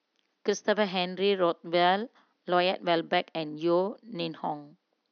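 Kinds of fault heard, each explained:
No technical faults can be heard in this speech clip. A low level of room noise sits about 54 dB below the speech, part of the space where the microphone was rather than a fault of the system.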